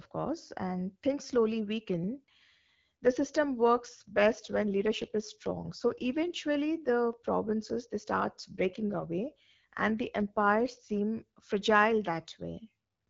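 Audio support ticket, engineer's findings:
AMR rate drop at 3.19–6.36 s and 8.20–10.96 s. Speech turns rougher and more synthetic, with bandwidth unchanged and no dropouts. The network cut the AMR-WB rate on a weak radio link, moving bits to error protection. Sound fits a step from 12.65 kbit/s to 8.85 kbit/s, then back.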